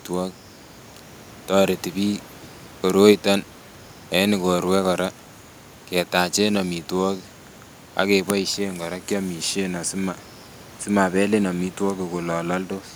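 No technical faults can be heard in the signal, and the only thing beneath the speech is the room's own background noise, sitting about 25 dB below the voice.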